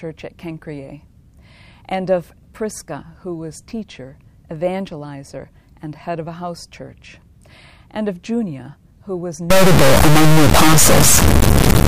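From 9.50 s to 11.88 s there is an integer read as float fault. 32-bit integer samples are decoded as 32-bit floats, producing near-zero or enormous values. It sounds like a deafening buzzing square wave. The waveform slams between zero and the clipping limit, and the spectrogram shows solid broadband energy.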